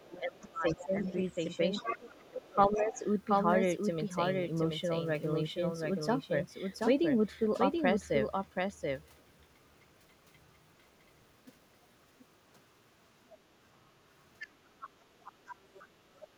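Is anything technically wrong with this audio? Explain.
Yes, the clip has three kinds of fault.

Doubled audio track, throughout the clip: a second full-band copy of the speech trails the original by roughly 0.7 s, sitting about 5 dB lower. The cause is likely a second capture path or an edit that mixed the same material in twice, out of step. It sounds like a dry, stuttering repeat with no room tail, smearing each phrase into the next.

Speech suppressed in double talk, from 0.0 to 1.43 s and again from 1.81 to 3.03 s: the talker's level dips for about a second in total within each span, by up to about 20 dB in the first and about 15 dB in the second. With both sides talking at once, the echo canceller likely could not tell the near talker from loudspeaker echo and attenuated everything, so the speech dips in patches.

Other side's voice leaking through, from 0.15 to 3.0 s at about 15 dB below the talker, briefly at 6.73 to 6.78 s and 9.03 to 9.22 s at about 35 to 40 dB down, and from 14.19 to 16.27 s at about 20 dB down: a second voice can be heard underneath. 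The likely cause is that the far side played over a loudspeaker was picked up by the microphone, and the echo canceller left part of it in.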